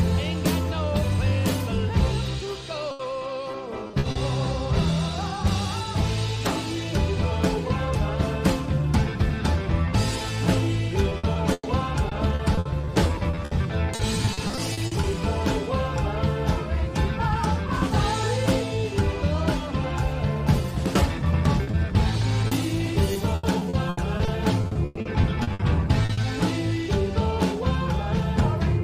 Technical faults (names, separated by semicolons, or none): repeated packet loss (robotic sound); short concealed packet loss